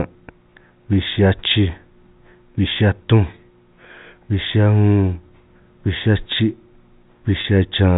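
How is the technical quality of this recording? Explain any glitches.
One glitch occurs near the end of the speech, heard through the narrow telephone band of G.711 coding, which cuts everything above 4 kHz. Packet loss with pitch repetition occurs at 7.41 to 7.44 s. About 30 ms of audio went missing, which fits a single lost packet. The receiver filled the gap by repeating the last pitch period, so the sound briefly holds as a slightly buzzy, sustained tone before the speech resumes.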